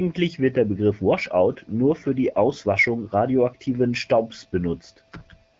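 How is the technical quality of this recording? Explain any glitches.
There's one glitch, right at the tail: from 5.53 to 5.59 s you get AMR comfort noise. The phone decided the talker had gone quiet and stopped sending speech frames, so for those last 66 ms the receiver swaps the real background for a smooth, steady synthetic hiss built from a rough level-and-spectrum sketch. It's brief, but the room sound audibly flips to that flat fill. The speech itself carries the light coloring of AMR wideband (HD Voice), clear enough to suggest a rate around 12.65 kbit/s.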